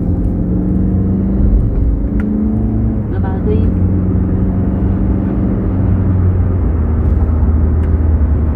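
Nothing goes wrong technically here; the sound runs along without a single glitch, dropout or stumble worth pointing out.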